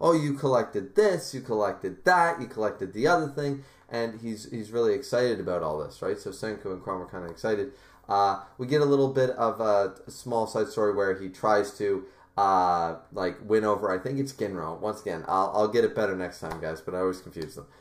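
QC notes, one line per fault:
No faults heard.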